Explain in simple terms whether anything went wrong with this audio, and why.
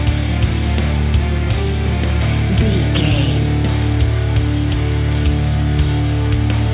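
Nothing went wrong here.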